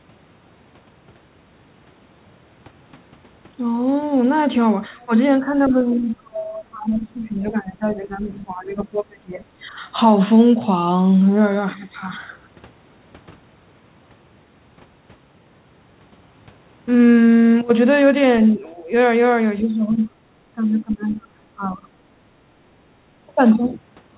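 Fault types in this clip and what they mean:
Speech suppressed in double talk: the speech level sinks by about 10 to 20 dB in stretches, longest from 5.67 to 9.43 s, likely an echo canceller ducking the talker while the far end spoke. Unlike packet-loss dropouts, the level is pulled down.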